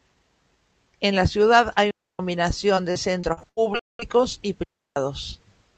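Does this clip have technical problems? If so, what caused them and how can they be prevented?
Yes. Right after "la ciudad hay", the sound drops into clean near-silence from 1.91 to 2.19 s, and again from 4.63 to 4.96 s. Neither hole has noise around it. This is a digital wireless dropout: the receiver lost too much data and muted briefly. Keeping the transmitter in clear line of sight, closer to the receiver and away from interfering devices prevents it.

From 2.75 to 4.21 s the speech turns choppy and robotic, with nine short holes up to 75 ms long patched by stretched sound. This is repeated packet loss, with the call's concealment filling the gaps. A steadier network connection with less congestion, or a larger jitter buffer, prevents it.

Inside that stretch, from 3.79 to 3.99 s, the audio stops outright for about 0.2 s and then resumes. That is likely a playback stall, with the player running out of data or being blocked. 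Giving the playback thread priority and keeping its buffer from running empty prevents it.

Underneath all this, the Opus call path can be heard limiting the top end at around 8 kHz.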